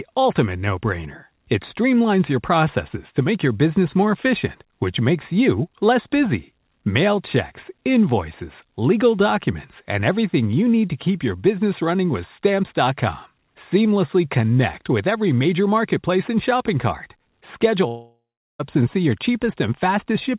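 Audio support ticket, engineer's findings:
Long network dropout, 17.88–18.61 s. The speech stops and the last sound carries on as a fading buzz or hiss. About 0.39 s of silence follows before the audio resumes at "and see your". Likely cause: packet loss on the call path. About 0.72 s of audio never arrived, and receiver concealment extended the final frame before giving up. The lost span is not recovered. The band limit at 4 kHz from the G.711 path is present throughout.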